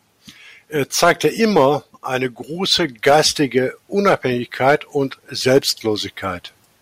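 Hard clipping hits the speech five times: 1.03–1.66 s, 2.72–3.58 s, 4.06–4.15 s, 4.62–4.75 s and 5.47–5.58 s. Peaks overshoot the stage's ceiling by about 3 to 6 dB and get sliced flat, so loud syllables pick up a gritty, crackly edge.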